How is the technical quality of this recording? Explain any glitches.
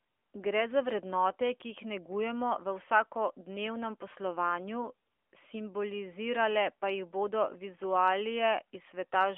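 The recording is narrowband phone-quality speech, with plainly audible codec damage throughout its length.

From start to finish the voice is boxy and band-limited, with nothing below about 300 Hz or above 3.4 kHz, and a buzzy, synthetic edge. This is the AMR narrowband mobile codec. It resynthesises speech from a vocal-tract model excited by a few pulses per short subframe, and the modelling at this bit rate, which points to roughly 10 kbps, leaves the grainy, artificial quality.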